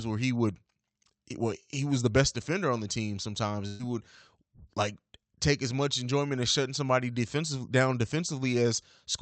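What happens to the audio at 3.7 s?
At 3.67 s, just after "on the team sometimes", a burst of packet loss interrupts the speech until 3.82 s. The receiver's concealment stretches the last received sound across about 120 ms, letting it decay into a held, fading sound instead of going silent. When real audio resumes, roughly 120 ms of the original speech is gone, so the phrase jumps forward. The surrounding call audio is band-limited to about 8 kHz.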